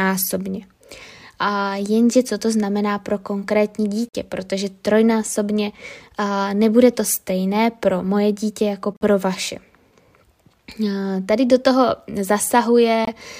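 The speech drops abruptly into dead silence three times: at 4.09 to 4.15 s, between "to znamená pro konkrétní" and "protože trojnásobně"; at 8.93 to 9.02 s, after "pro moje dítě jako"; and at 13.05 to 13.10 s. Each is a corrupt frame muted: the decoder rejected damaged compressed frames and the player substituted silence, with timing kept.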